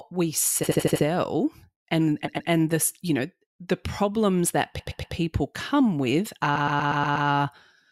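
Repeated frames stutter this speech at 0.63–1.04 s, 2.25–2.49 s (just before "this you know the"), 4.79–5.15 s (just after "know the problems that") and 6.55–7.27 s. Short compressed blocks of 80 ms, then 120 ms, are replayed two to six extra times, lengthening the audio.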